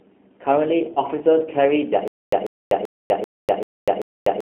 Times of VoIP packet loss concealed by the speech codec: 0.94-0.99

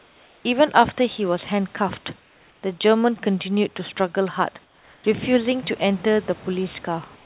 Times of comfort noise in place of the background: 0.00-0.44, 2.20-2.62, 4.64-5.04, 7.16-7.25

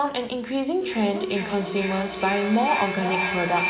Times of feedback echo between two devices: 0.81-3.69

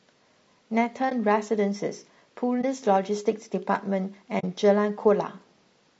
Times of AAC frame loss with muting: 1.09-1.13, 2.61-2.64, 4.39-4.44

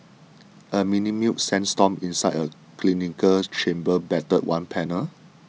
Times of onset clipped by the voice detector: none

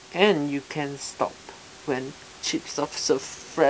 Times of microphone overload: none

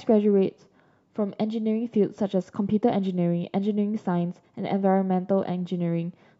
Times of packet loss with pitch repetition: none

